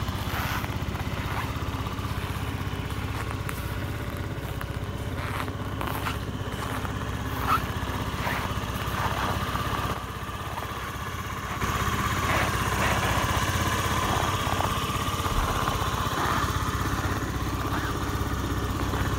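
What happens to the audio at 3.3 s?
Nothing goes wrong at 3.3 s; the audio runs on intact through that moment, with no dropout, click, distortion or other audible fault.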